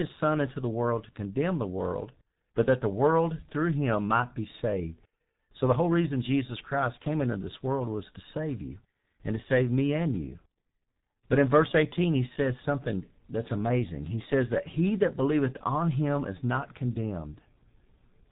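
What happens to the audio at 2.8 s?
At 2.8 s the G.723.1 codec damage heard throughout the clip is present. This very low-rate telephony codec, consistent with roughly 6 kbit/s, removes everything above 3.8 kHz and models the voice coarsely, so speech sounds heavily muffled and hoarse, with smeared consonants.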